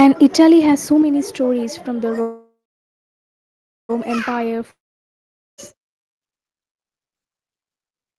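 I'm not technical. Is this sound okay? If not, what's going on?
No, it has three problems.

At 1.02 s the voice and the room sound behind it suddenly get quieter in one step and stay that way. This is a microphone volume stepped down. The calling program most likely decided the microphone was too loud and turned its input level down by itself. Nothing is cut out; everything after that point is simply a bit softer than before.

From 2.21 s to 3.91 s the speech stops. The last sound lingers briefly as a fading buzz, then there is about 1.3 seconds of silence. The speech then picks up exactly where it left off. This is a call audio freeze. The audio was likely held up on its way across the network, so the receiving end ran out of sound and had to wait. Nothing was lost, but the rest of the clip now arrives about 1.7 seconds later than it should.

From 4.71 s to 5.74 s there is another stop with a brief fading buzz and then roughly 0.8 seconds of silence. 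This time, when the speech returns, part of it is gone. About 0.9 seconds of what was said was never heard. This is a long network dropout. The sound likely never arrived, so the call skipped ahead instead of waiting.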